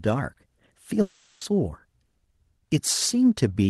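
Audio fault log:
1.01 to 1.42 s, long network dropout: about 400 ms of speech is lost and never heard. In its place the receiver stretches the last sound into a synthetic buzzy hiss that fills the whole gap without dropping to silence. Speech then resumes further on with that stretch missing. The likely cause is a break in packet delivery on the call path, where Opus coding cuts high frequencies off above 12 kHz.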